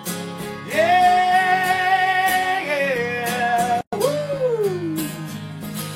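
At 3.81 s a gap at a join of encoded pieces opens for about 118 ms, until 3.93 s. Separately encoded 4-second pieces were butted together untrimmed, so encoder delay and final-frame padding left silence with smeared edges. Unlike a dropout, the sound resumes exactly where it stopped.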